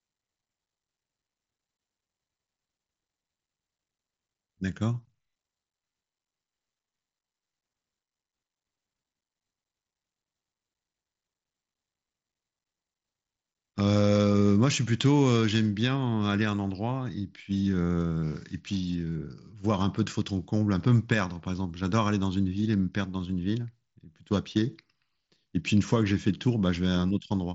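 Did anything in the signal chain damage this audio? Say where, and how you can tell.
No, nothing in the chain damaged it; the band stops at about 7.7 kHz, as expected of a Bluetooth mSBC headset link.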